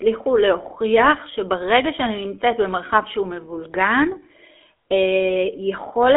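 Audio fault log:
throughout, GSM full-rate codec: the speech carries a plainly audible buzzy, gravelly roughness, the sign of the old GSM full-rate coder, which fits a 13 kbps rate. It rebuilds the voice from a vocal-tract model excited by sparse, regularly spaced pulses, so fine detail turns rasping. On a spectrogram everything stops at 3.8 kHz, with energy concentrated in a telephone band of about 300 Hz to 3.4 kHz.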